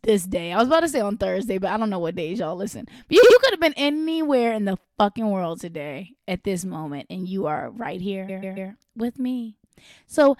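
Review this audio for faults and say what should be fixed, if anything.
Repeated frames stutter the speech at 3.22 s and at 8.28 s. At 3.22 s a block of about 60 ms plays twice more, adding 139 ms up to 3.36 s, which fits a run of three compressed frames. At 8.28 s a 139 ms block plays three extra times, adding 418 ms up to 8.70 s, which fits six frames. The decoder is handed the same data again, so the sound loops and the clip runs long. Fix the writer or sender so each frame is stored or sent only once.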